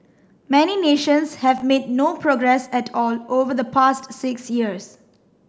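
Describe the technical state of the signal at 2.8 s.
At 2.8 s the signal is intact, with no audible dropout, distortion, or other fault at that moment.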